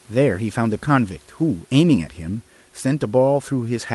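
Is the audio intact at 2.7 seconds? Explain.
Yes, the speech at 2.7 seconds is intact, with no dropout, glitch or other fault at that moment.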